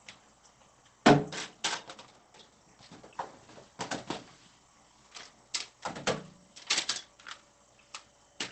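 Opus compression runs through the whole clip. The sound is muffled and hoarse, with plainly audible damage. Nothing reaches above 8.5 kHz. This points to the encoder's speech mode at a very low rate, likely around 16 kbps in wideband.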